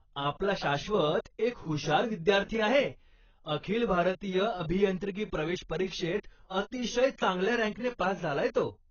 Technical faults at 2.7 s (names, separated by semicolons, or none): AAC compression